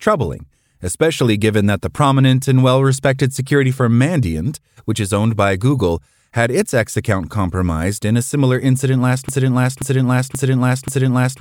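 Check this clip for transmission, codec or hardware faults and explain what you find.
One fault is present. A broken-record loop runs from 9.29 s to the end, right after "a similar incident last". It likely comes from a stalled player or stream resending its last buffered fragment, so a 0.53 s piece repeats exactly four times back to back. The speech that should follow is lost.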